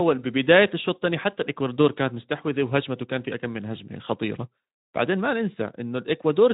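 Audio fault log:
No faults heard in this speech.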